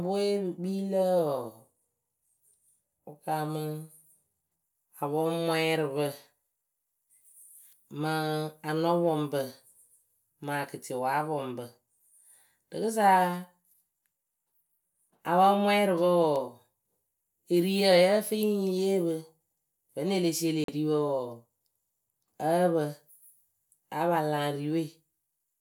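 At 20.64 s the speech cuts out for about 43 ms, returning at 20.68 s, the mark of a Bluetooth dropout. The likely cause is audio packets arriving at the headphones too late to play, so they were discarded and the output went silent; a gap of that length fits roughly two lost packets. The hole has abrupt edges or a fade of a few milliseconds, and when the sound comes back it has moved on, as though it had kept playing through the silence.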